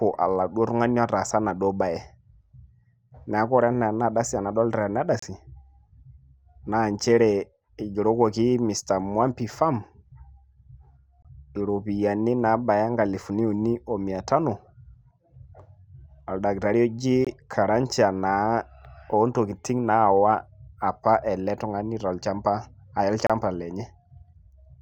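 At 5.19–5.23, 11.22–11.25, 17.25–17.27 and 23.27–23.30 s, a gap between stream segments leaves a hard-edged hole of roughly 20–30 ms in the speech. Unlike a dropout, the speech resumes intact, and the six-second spacing matches segment boundaries.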